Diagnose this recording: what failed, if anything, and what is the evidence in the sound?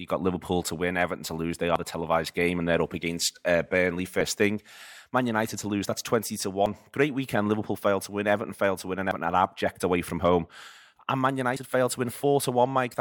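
A chunked capture buffer likely loses about 50 ms per handover: audio missing between chunks, heard as abrupt skips at 1.76, 6.66, 9.11 and 11.56 s.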